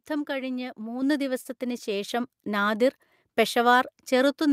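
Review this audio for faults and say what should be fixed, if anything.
Microphone volume stepped up, at 1.02 s and again at 2.09 s. The speech and the background rise together in a single step, by about 5 dB the first time and about 3 dB the second, so the change comes from the capture side. Automatic input-level control judged the microphone too quiet and raised the device's input volume at once, without easing it in gradually. To prevent it, set a suitable fixed input level and turn off automatic microphone volume adjustment in the call software.

Short stall from a late packet, from 1.41 to 1.47 s. A sound is held for about 37 ms longer than it should be, then the speech continues from exactly where it left off, with nothing missing. A packet arrived late, the jitter buffer ran dry, and the receiver stretched the last audio to fill the gap, which left playback running 37 ms further behind. 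To prevent it, use a larger or adaptive jitter buffer and reduce jitter on the network path.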